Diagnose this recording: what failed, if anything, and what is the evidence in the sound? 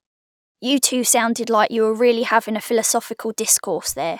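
Nothing stood out on listening to this speech recording; no failure at any stage could be heard.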